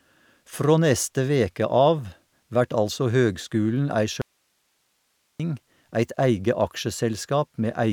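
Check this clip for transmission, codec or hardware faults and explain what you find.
One fault turns up in the speech. Audio dropout to a faint residue, from 4.22 s to 5.40 s: the speech cuts out abruptly for about 1.2 s, leaving only hiss roughly 45 dB below the speech level. The likely cause is a lost signal upstream while the path after the break stayed live.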